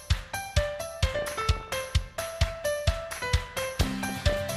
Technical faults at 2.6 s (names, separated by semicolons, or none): none